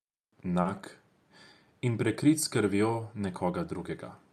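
From 0.61 to 0.76 s the speech has a short stall from a late packet. The jitter buffer ran dry, so the receiver held the last sound about 40 ms longer, then resumed in place. Unlike a lost packet, nothing is skipped; a sound just lingers, with a slight buzz or dip.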